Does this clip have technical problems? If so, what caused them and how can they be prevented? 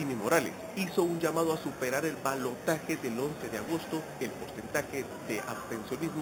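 Yes, there's imaging from sample-and-hold upsampling throughout: a metallic fizz at 4 to 8 kHz, about 15 dB down, suggesting 8 kHz audio with samples repeated unfiltered. Use a proper interpolating resampler instead.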